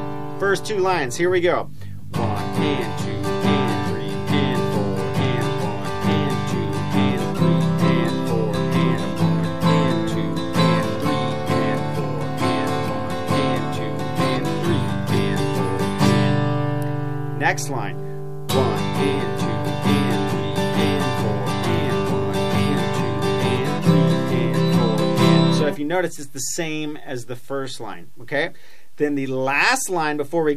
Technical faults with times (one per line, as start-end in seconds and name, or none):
none